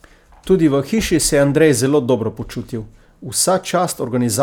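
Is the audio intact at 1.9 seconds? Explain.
Yes, the speech at 1.9 seconds is intact, with no fault at that moment.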